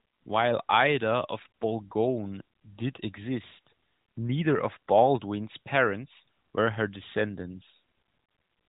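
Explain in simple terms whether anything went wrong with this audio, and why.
Nothing went wrong with this speech recording. It has been carried through the AMR narrowband mobile codec, just as a phone call would be, so nothing above 3.8 kHz comes through and the codec's light effect on the sound is normal for that path.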